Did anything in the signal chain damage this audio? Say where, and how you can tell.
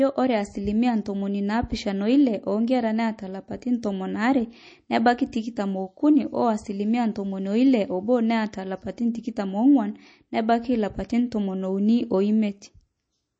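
Yes. Throughout, the speech sounds watery and swirly with nothing above 8.4 kHz, likely MP3 compression at the codec stage, consistent with a bitrate around 32 kbps.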